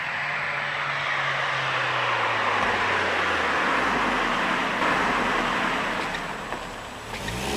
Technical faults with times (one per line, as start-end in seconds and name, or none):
4.81-7.56 doubled audio track